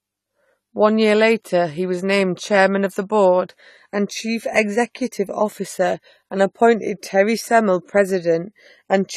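From start to finish the speech carries plainly audible codec damage, likely from AAC compression at a low bitrate, in the region of 32 kbps. The spectrum stops dead around 14 kHz, so the top end sounds dull, and sibilants take on a fizzy, smeared texture. The encoder quantises each block of frequency lines coarsely and drops or roughly fills the bands it cannot afford, which gives sustained sounds a warble.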